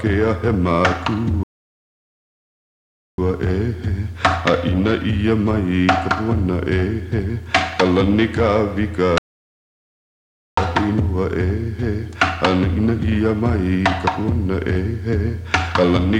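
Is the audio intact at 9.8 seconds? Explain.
No. At 9.8 s the sound is halted by a rebuffering stall from 9.18 to 10.57 s: the player ran out of downloaded audio and fell silent for about 1.39 s. Unlike a dropout, it resumes exactly where it stopped, adding time without losing any sound.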